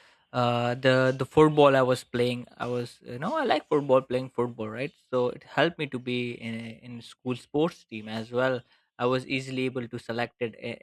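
No technical faults are audible anywhere in the speech recording.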